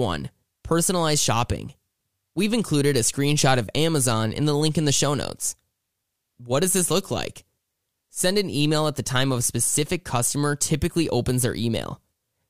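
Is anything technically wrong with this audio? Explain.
No, nothing is technically wrong with this audio.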